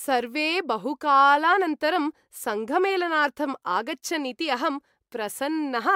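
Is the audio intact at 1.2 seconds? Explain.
Yes, the audio is intact at 1.2 seconds, with no audible fault at that point.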